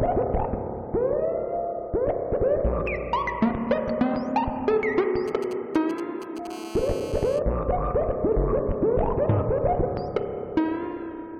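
GSM signalling bursts appear from 5.28 to 6.47 s. A nearby 2G phone is exchanging short groups of radio bursts with the network, and the audio circuitry rectifies them into a galloping dit-dit-dit of brief 217 Hz buzzes, roughly 15 dB below the sound.

GSM phone buzz follows from 6.50 to 7.39 s, once the phone settles into a call and transmits continuously at 217 bursts per second. The rectified pulses become a steady, hard, raspy 217 Hz buzz rich in harmonics, unrelated to the sound and about 17 dB below it.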